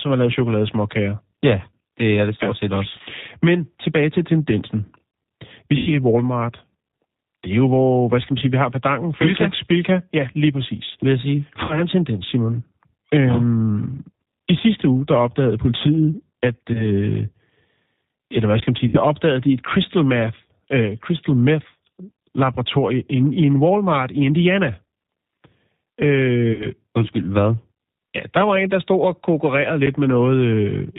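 Throughout the recording the speech has the narrow, slightly rough and synthetic quality of the G.729 codec, which fits G.729A at 8 kbit/s. Nothing above 4 kHz survives, and the damage is plainly audible. The decoder rebuilds each 10 ms frame from a vocal tract filter, a pitch predictor and a few pulses, so consonants lose their crispness and the voice takes on a faintly artificial texture.

The first VoIP packet loss concealed by the speech codec runs from 5.77 to 5.94 s and covers about 100 ms of missing audio, which fits five lost 20 ms packets. With no data arriving, the decoder repeats its last pitch and filter settings at falling gain. The speech is stretched into a fading sound and stays weak briefly after audio resumes.

The same fault returns at 11.64 to 11.83 s, between "jeg sige" and "en tendens", where about 60 ms is lost. Another follows at 16.73 to 16.87 s, just after "der opdagede politiet at". 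Only about 20 ms is missing there, but the recovery still drags on past it.

At 18.60 to 18.62 s, an underrun with held sample flattens the waveform for 20 ms. The output buffer ran dry and the converter held its last value, so the sound stops almost silently. About 20 ms of live audio was skipped during the gap, so playback picks up later in the signal.

Packet loss concealment appears again at 18.88 to 18.98 s, between "hvad skal man sige" and "opdagede de et crystal", with about 60 ms lost. The last instance falls at 26.53 to 26.67 s, also about 60 ms, with the same stretched, decaying extension and weakened onset afterwards.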